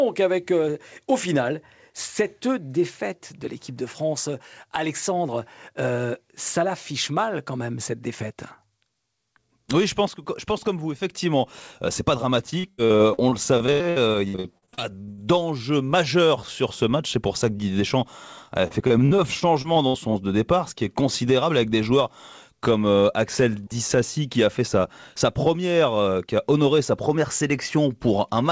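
Repeated packet loss (robotic sound) runs from 12.50 to 15.20 s, after "c'est pas" and before "majeur sur ce match", and again from 18.68 to 19.96 s, just before "son sens de départ". Lost or late packets were patched by stretching the previous sound, so the speech turns choppy with pieces missing. Holes reach 82 ms and 60 ms, and roughly a third and a fifth of each stretch is filled in. Throughout, the call codec leaves nothing above 8 kHz.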